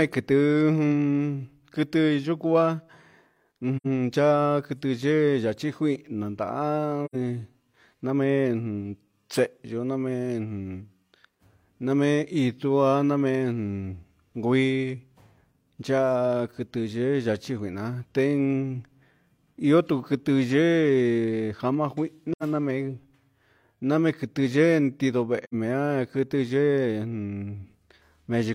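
At 3.76, 7.05, 22.32 and 25.44 s the speech vanishes for about 0.1 s: AAC frame loss with muting. The decoder zeroed the missing frames, and overlapping windows fade the sound out and back in, leaving a soft-edged hole.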